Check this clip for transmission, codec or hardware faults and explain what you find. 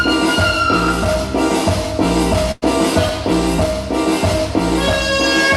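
One transmission fault is present: a burst of packet loss.

It runs from 2.51 to 2.64 s. Several consecutive packets failed to arrive in time. The receiver filled the gap by extending the last sound it had. It faded that fill down for about 103 ms. The last 20 ms or so drop to silence. When the audio resumes, roughly 100 ms of the original sound is simply gone. It is heard as a brief held, fading smear, a short dropout, then a jump ahead.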